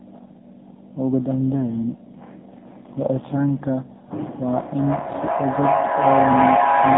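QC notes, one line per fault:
Throughout: AMR narrowband mobile codec. The sound is confined to a telephone band from about 150 Hz to 3.7 kHz, with nothing audible above 4 kHz. It has a plainly buzzy, synthetic edge. The codec rebuilds each 20 ms frame from a vocal-tract model excited by a handful of pulses, and at this low data rate, which fits the 7.4 kbps mode, too few pulses survive to carry the natural texture.
4.28 to 6.98 s: feedback echo between two devices. From 4.28 s the speech returns on itself at a steady interval of roughly 0.4 s, each copy thinner and more ringing. The repeats build up instead of fading, peaking about 3 dB above the direct speech. One device's loudspeaker is replaying the other's microphone, that microphone catches it again, and neither echo canceller removes sound it didn't play itself.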